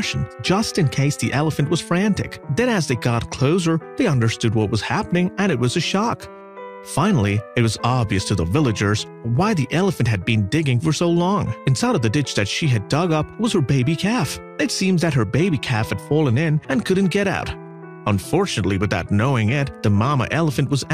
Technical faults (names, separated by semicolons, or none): clock slip clicks